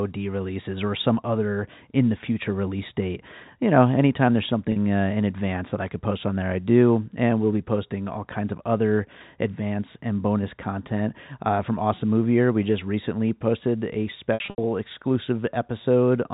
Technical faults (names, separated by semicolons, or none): packet loss with pitch repetition